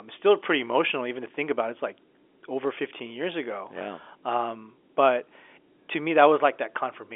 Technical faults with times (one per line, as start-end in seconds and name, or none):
none